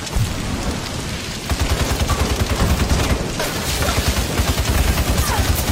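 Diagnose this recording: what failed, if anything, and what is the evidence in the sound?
Nothing failed: the signal runs without gaps, interruptions or damage at any stage between capture and playback.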